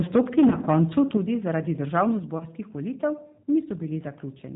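It's a speech clip that has gone through what sounds like the G.729 codec the whole way. Nothing comes through above 4 kHz, and the voice has that rough, slightly synthetic edge you get when speech is rebuilt from a filter and a handful of pulses, which fits an 8 kbit/s G.729 call. From 0.15 to 1.17 s the loudest syllables have a harsh, crackly top, and it briefly comes back from 1.97 to 2.01 s. That's likely microphone overload, with peaks about 6 dB past the converter's limit in the first stretch and about 1 dB in the second, flattening a few percent of the samples. Right at 1.17 s the whole level drops by about 6 dB in one step, and it happens again at 2.19 s, down about 5 dB. That sounds like the microphone volume being stepped down by the call software in reaction to the distortion. There are also two short smeared patches, from 0.49 to 0.57 s and from 2.38 to 2.45 s. Each one fits a single lost 20 ms packet with the loss concealed by the speech codec, which stretches the last sound out and fades it, so the voice stays a bit off for a moment after the audio resumes.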